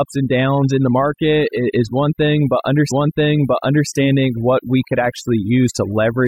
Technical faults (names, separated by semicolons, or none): overdone noise removal; stream segment repeated